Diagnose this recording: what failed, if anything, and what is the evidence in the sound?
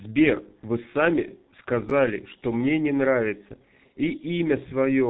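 The codec stage is the big one. The whole speech clip has that muffled, hoarse quality of the G.723.1 codec, with nothing getting through above 3.8 kHz and consonants smeared because the voice model only refreshes every 30 ms frame. The damage is heavy throughout, and the hoarse texture fits a very low rate around 6.3 kbit/s, the kind of squeeze this old internet-telephony codec was built for.

There's also a buffer or storage hiccup from 1.89 to 1.91 s: chunks out of order. A 10 ms slice landed one chunk late, so it plays after the slice that should have followed it. Nothing's missing, but the swapped order makes a brief jumbled blip, with three hard joins right at that spot. It looks like a write or delivery timing slip rather than loss.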